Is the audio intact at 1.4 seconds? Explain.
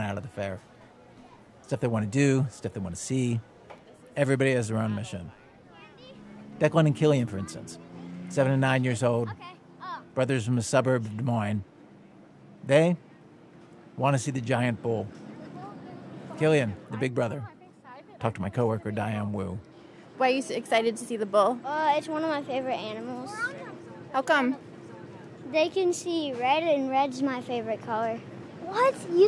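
Yes, the audio at 1.4 seconds is intact, with no dropout, click, distortion or other fault at that point.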